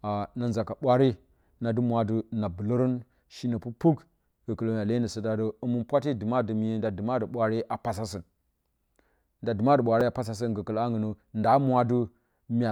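At 10.01 s the speech has a repeated buffer: fresh audio arrived late, so a 5 ms slice, pointing to a very small buffer, played twice. That hard double join sounds like a click, not a dropout's gap of silence, with a few milliseconds of audio lost.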